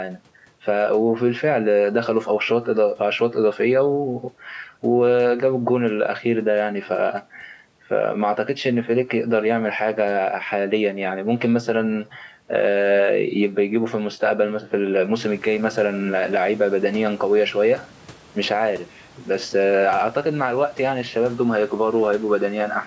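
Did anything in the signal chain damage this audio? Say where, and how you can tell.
No, nothing in the chain damaged this speech: the band stops at 8 kHz and the lowest bass is trimmed, as expected from call microphone processing, and the room noise that rises by about 13 dB around 15 s belongs to the recording and stays about 28 dB below the speech.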